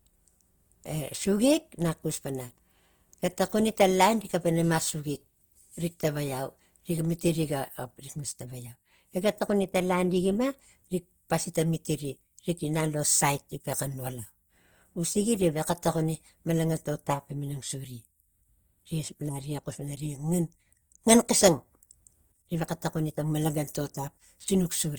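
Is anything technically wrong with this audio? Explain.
Yes. Opus compression, throughout the speech, is likely behind the grainy, rough texture. The encoder keeps each band's energy but, short of bits, fills bands by folding lower ones or with noise, which fits a bitrate near 24 kbps in music mode. The audible damage is plain: tones sound noisy and coarse rather than swirly, while the full bandwidth reaches about 20.2 kHz.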